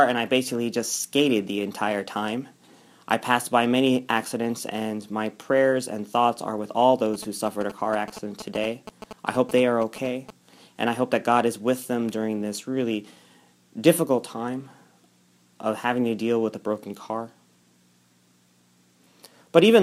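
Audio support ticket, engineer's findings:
GSM signalling bursts, 7.14 to 10.31 s: galloping dit-dit-dit ticks with short buzzes at a 217 Hz repeat rate, roughly 10 dB under the programme. A nearby 2G handset signalling; its RF bursts are rectified by the audio circuit.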